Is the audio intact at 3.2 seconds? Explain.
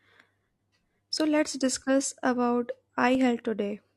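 No. Just before that point, from about 3.15 to 3.19 s, there is an overlap between stream segments. The audio arrives in segments of about 2 s, and two of them carried overlapping timestamps. The player discarded the doubled span, but that speech had not actually been repeated, so roughly 38 ms simply vanishes. It is heard as a click or tiny skip in the speech. On a waveform the trace jumps abruptly instead of continuing smoothly. On a spectrogram a thin vertical broadband line marks the splice.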